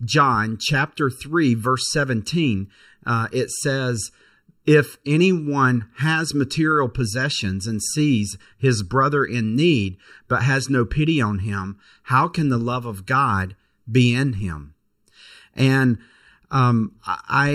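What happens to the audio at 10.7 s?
At 10.7 s the speech sounds hollow and phasey because of channel delay (comb filtering), which runs through the whole clip. One channel lags the other by about 0.7 ms. Summed to mono, this cancels evenly spaced frequencies starting near 700 Hz. A spectrogram shows fixed dark horizontal notch bands.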